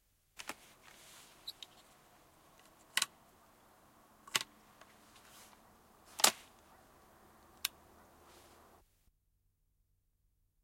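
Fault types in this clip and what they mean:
Nothing stood out on listening to this recording; no audible problem showed up at any point.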